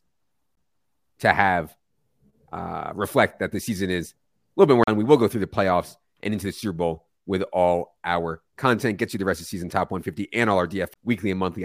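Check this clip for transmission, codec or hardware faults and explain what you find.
Three CD skips. A tick and a brief mute land at 0.55 s, just before "to have", at 4.83 to 4.88 s after "a little bit more", and at 10.94 s, each resuming from another point. The laser jumped tracks on the disc's spiral and the player silenced the gap.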